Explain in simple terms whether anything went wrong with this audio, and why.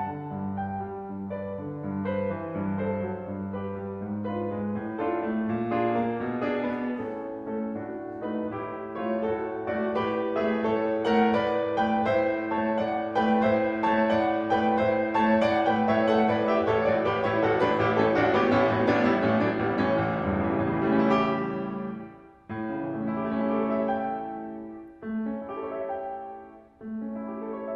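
Nothing went wrong: the music went through a normal call connection, which trims the very highest frequencies (the top end stops around 12 kHz, as expected from a call codec), and no faults show up anywhere in the clip.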